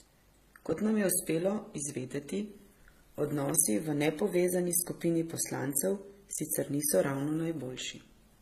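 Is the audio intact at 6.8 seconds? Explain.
No. At 6.8 s, as throughout, the speech has the doubled artefacts of transcoding between lossy codecs, likely MP3 then HE-AAC at low bitrates. A spectrogram shows nothing above 14.9 kHz.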